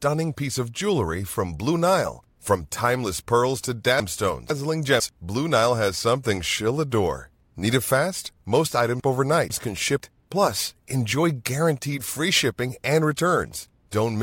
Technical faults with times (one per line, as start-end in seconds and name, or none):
4.00-5.00 chunks out of order
9.00-10.00 chunks out of order